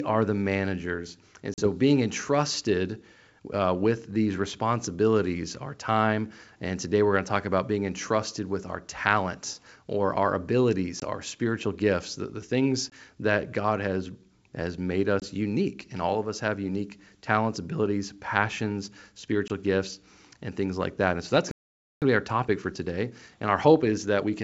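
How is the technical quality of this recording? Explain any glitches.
The recording has several audible faults: five short dropouts, one longer stall, and a hurried stretch at the end. The wideband G.722 telephone coding itself shows only faint hiss, consistent with its full 64 kbit/s rate.

Packet loss on an ADPCM call occurs at 1.54–1.68 s (about 40 ms, roughly two packets), 11.00–11.03 s, 12.90–12.95 s, 15.20–15.28 s and 19.48–19.51 s (about 20 ms each). Lost packets become hard-edged silence, and the decoder's predictor briefly loses sync, so the speech returns with a click or slight distortion.

A playback stall silences the output from 21.51 to 22.02 s, about half a second, cutting the speech off mid-flow. This is likely caused by the player running short of data.

Time-compressed catch-up follows from 22.02 s to the end. The player trims its backlog by cutting and cross-fading small segments, so the speech runs about 1.1 times faster at normal pitch.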